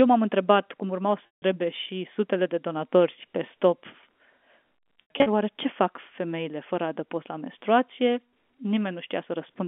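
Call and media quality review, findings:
Packet loss with pitch repetition, 1.27–1.42 s, after "întrebat cum urmau", before "și sutele de donatori": about 160 ms missing, which fits eight 20 ms packets. The jitter-buffer concealment loops the last pitch period into a held, buzzy tone, fades it toward silence, then cross-fades back.

Packet loss with pitch repetition, 5.02–5.26 s, just before "oare ce fac femeile": 160 ms lost in scattered gaps across 240 ms, the longest 80 ms. The G.711 A-law line band (250 Hz–3.4 kHz) applies throughout.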